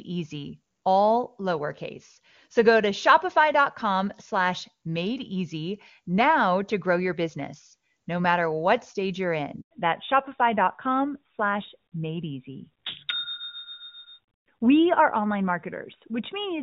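At 9.61 s the speech simply drops out for about 100 ms, until 9.71 s. That's a handover gap: the call was switched between networks and no frames got through during the move, so whatever was said in that tenth of a second is gone.

Right as it comes back at 9.71 s, you've got a fallback to narrowband that runs to the end. Before the switch, the HD Voice sound is clean and bright, which fits AMR-WB at the top 23.85 kbit/s rate. Afterward nothing survives above 4 kHz, so the speech goes duller and rougher. That points to AMR-NB at 12.2 kbit/s.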